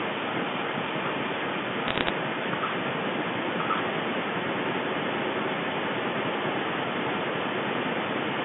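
Throughout the clip, from 0 to 8.4 s, a second copy of the speech trails the original by about 1.07 s, only slightly quieter than the direct sound. This is an echo leak, most likely from one party on a loudspeaker whose echo canceller let the returning sound through, sending it back down the line.

Between 1.88 and 2.1 s, a short burst of sharp ticks and crackle sits over the speech. These are bit errors on a digital phone line. At a rate of about 0.7 percent, scattered flipped bits each corrupt a single sample of the G.711 stream, and hits on high-order bits produce the loudest clicks. The narrow telephone band, roughly 150 Hz to 3.5 kHz, is audible throughout.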